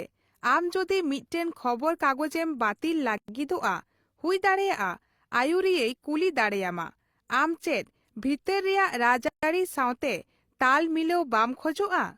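At 3.18 s the speech drops into a gap at a join of encoded pieces, about 108 ms of silence running to 3.28 s, and it happens again from 9.28 to 9.43 s, this time 144 ms. The audio was encoded in chunks of about 6 s and stitched together untrimmed, so each chunk's start-up delay and padded last frame stay in the file. You hear a dropout with smeared edges, then the speech carries on exactly where it stopped.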